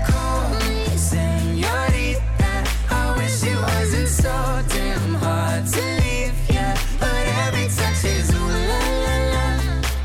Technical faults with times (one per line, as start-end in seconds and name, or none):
none